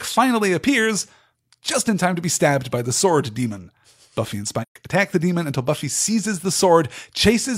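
At 4.62–4.76 s, before "attack the demon until", AAC frame loss with muting leaves a 128 ms soft-faded silence: tapered waveform, blank spectrogram column.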